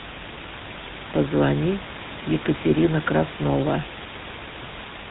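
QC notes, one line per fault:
Throughout: GSM full-rate codec. The speech has a plainly audible buzzy, gravelly roughness and nothing above 4 kHz. That fits a 13 kbps GSM full-rate path, which models the vocal tract and rebuilds the excitation from sparse, regularly spaced pulses.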